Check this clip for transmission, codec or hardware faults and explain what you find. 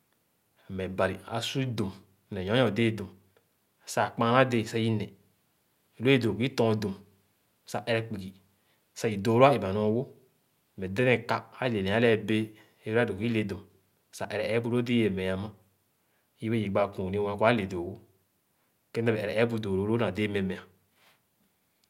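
No faults found anywhere in the speech.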